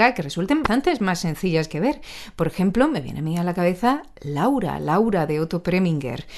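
Damaged data in a compressed stream at 0.63 to 0.66 s in this speech clip, right after "que resulten" and before "más sencillas que ver", gives a brief glitch: corrupted bytes there make the decoder misread those frames and lose sync until it finds the next valid frame header.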